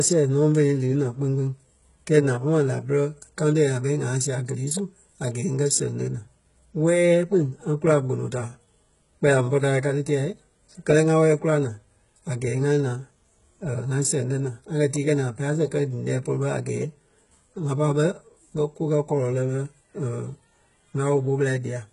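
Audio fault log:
Throughout, HE-AAC compression, likely: the treble is rebuilt rather than kept, with nothing above 11.1 kHz. Upper harmonics are copied up from lower bands and fail to line up, so s sounds come out gritty and lispy. The heavy damage points to roughly 12 kbps.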